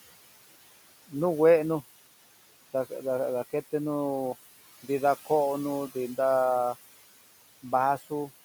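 Throughout, the background noise dips between phrases and swells under the speech, noise suppressor artifacts from frame-by-frame cuts of about 16 dB on room noise sitting about 17 dB below the speech.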